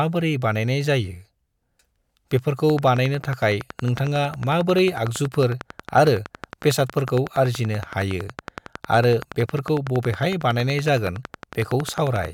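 From 2.70 s to 12.26 s, a train of clicks runs over the speech. Sharp, near-identical pulses arrive at a steady 10.9 per second, around a hundred in all. They peak roughly 10 dB above the speech and tick through pauses too. Electrical interference or a faulty connection is the likely cause.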